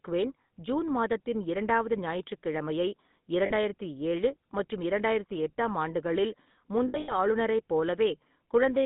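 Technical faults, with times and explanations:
throughout, GSM full-rate codec: The speech was carried by the original GSM full-rate coder, which rebuilds the voice from a vocal-tract model driven by sparse, regularly spaced pulses. That produces a plainly audible buzzy, gravelly roughness, consistent with about 13 kbps, inside a 150 Hz to 3.7 kHz band.
3.46–3.53 s and 6.88–7.17 s, lost GSM frames: Damaged frames were concealed by repeating the last good frame, so the sound hangs in a rough, metallic ring. The first gap, 40 ms, fits two lost frames. The second scatters 140 ms of losses over 200 ms, with the longest run around 70 ms.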